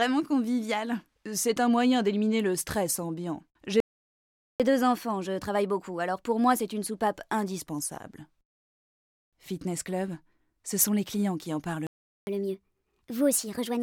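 At 3.80 s the audio halts for about 0.8 s, until 4.60 s. This is a playback stall: the output goes fully silent mid-flow and then resumes, most likely because the player's buffer ran dry or its thread was held up.

From 4.60 s to 7.60 s comes catch-up at higher speed. The player works through its backlog at 1.1 times normal rate, so tempo and pitch rise together by roughly a semitone and a half, then settle back. A pure pitch shift would leave the timing unchanged, but this one makes the audio both faster and higher.

A second playback stall silences the output from 11.87 s to 12.27 s, about 0.4 s, likely from the same buffer starvation. Catch-up at higher speed follows at 12.27 s and runs to the end at 1.25 times speed, pushing pitch up about four semitones. This rise is clearly steeper than the first, and there is no return to normal before the clip ends.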